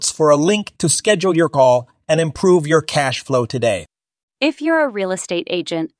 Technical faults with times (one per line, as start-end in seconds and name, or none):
none